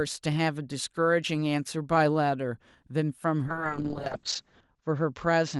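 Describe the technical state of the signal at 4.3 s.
At 4.3 s the speech is inside a call bitrate drop that begins at 3.47 s and runs to the end of the clip. The encoder's budget fell from 64 to 7 kbps and its bandwidth narrowed from 12 to 8 kHz, so the speech sounds coarse, watery and muffled.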